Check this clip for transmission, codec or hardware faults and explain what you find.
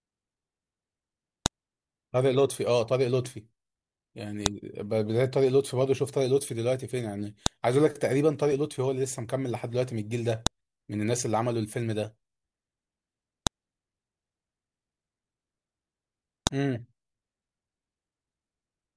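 A hardware or transmission fault recurs through this speech clip: sharp, loud clicks at 1.46, 4.46, 7.46, 10.47, 13.47 and 16.47 s, exactly every 3.0 s. This is a file header played as audio: separate WAV pieces were joined with their header bytes left in, and those bytes sound as a snap at each boundary.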